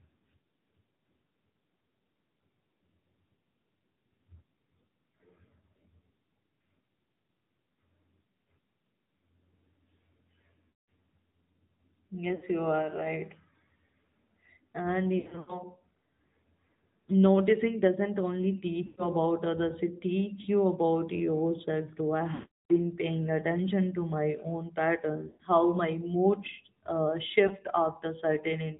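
Throughout, the speech has the AMR narrowband mobile codec sound: nothing above 4 kHz, and a plainly buzzy, synthetic edge to voiced sounds. That edge points to a mid-rate mode around 10 kbps. The coder rebuilds the voice from a vocal tract model fed with sparse pulses. That is why it sounds synthetic rather than muffled, as a simple low-pass filter would, or smeared and warbly, as a music codec would.

Lost AMR speech frames interrupt it at 10.68 to 10.89 s, 12.36 to 12.45 s, 15.20 to 15.62 s, 18.86 to 19.08 s, 20.42 s, 22.34 to 22.72 s, 25.28 to 25.43 s and 27.48 s. With each lost frame, the decoder repeats the last pitch and vocal tract settings at falling gain. The single frames at 20.42 and 27.48 s are brief dips. The longer runs at 10.68 s (200 ms) and 22.34 s (360 ms) stretch into a droning hold that fades to silence. At 15.20 s, short runs of up to 80 ms are scattered over 280 ms. 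The gradual fade tells this apart from hard dropouts or clicks.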